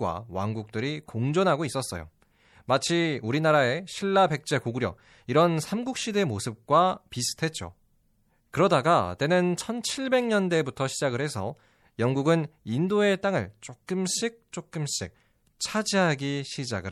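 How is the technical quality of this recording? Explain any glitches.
The recording has one clearly audible fault. MP3 compression damage runs throughout: likely a low-bitrate encode, about 64 kbps, which trims the treble and drops weak frequency detail frame by frame, leaving the speech watery, swirly and smeared.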